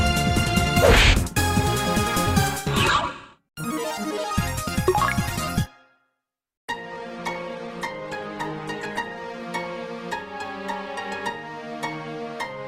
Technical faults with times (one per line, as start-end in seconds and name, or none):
5.20-9.55 call bitrate drop